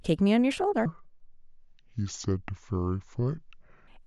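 A section at the wrong speed runs from 0.86 to 3.88 s. The speech plays at 0.64 times its recorded rate, likely from being clocked at the wrong sample rate. Pitch and tempo fall together, roughly seven semitones, making the voice deep and sluggish.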